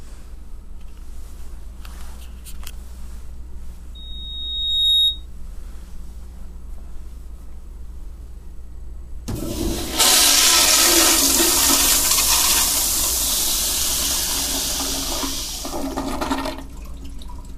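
At 3.95 s a loudspeaker feedback squeal starts: a 3.8 kHz tone swelling over about a second until it's roughly 5 dB above the sound, cutting off at 5.26 s.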